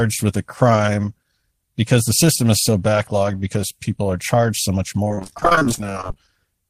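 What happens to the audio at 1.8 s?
Nothing goes wrong at 1.8 s; the speech there is intact, with no dropout, click, distortion or other fault.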